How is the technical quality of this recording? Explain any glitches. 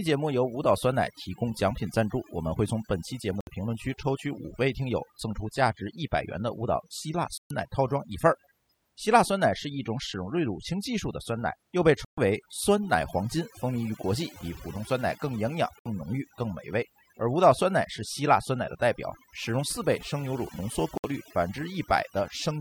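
The quality is compromised by two separate problems.

Overdone noise removal runs through the whole clip. The noise reduction was pushed too hard, so it pulls individual frequency bands right down whenever they look like noise. Quiet parts of the speech get stripped along with the hiss, leaving a near-silent background with twinkly specks.

There are also five digital broadcast dropouts, at 3.41, 7.38, 12.05, 15.79 and 20.98 s. The receiver lost good frames and muted until clean data returned. The gaps at 7.38 and 12.05 s last about 128 ms, and the others about 64 ms, which fits a few lost frames each time. The audio just punches out briefly, and what was sent in those gaps is gone.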